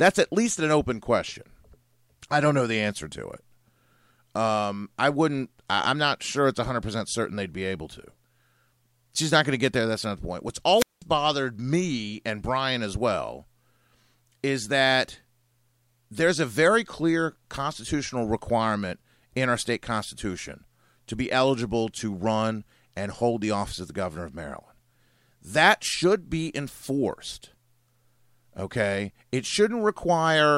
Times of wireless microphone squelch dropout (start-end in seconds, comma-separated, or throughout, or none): 10.77-11.02